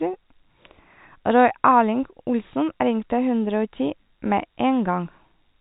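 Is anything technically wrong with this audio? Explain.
Yes, there's a packet loss with pitch repetition at about 2.80 s. Roughly 20 ms of speech went missing, which fits a single dropped packet. The receiver filled the hole by replaying the last pitch period, so you hear a brief, slightly buzzy hold. The G.711 telephone band underneath sounds as it should.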